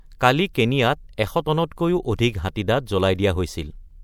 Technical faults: pre-echo

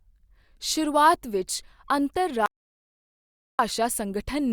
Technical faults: audio dropout to silence

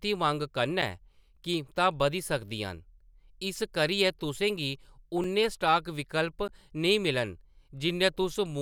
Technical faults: block of digital silence

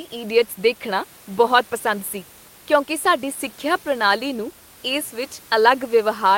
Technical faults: none

